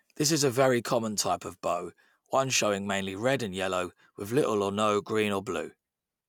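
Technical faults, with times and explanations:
No technical faults can be heard in this speech recording. Nothing stands out at any point that would call for a time or an explanation.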